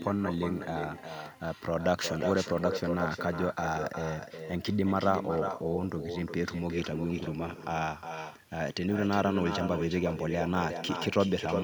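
From start to finish the speech carries echo with no canceller: the far end's loudspeaker feeds its microphone and the sound returns roughly 0.4 s later, about 7 dB down and thinner. Unlike reverberation, it is a distinct repeated copy, not a smeared tail.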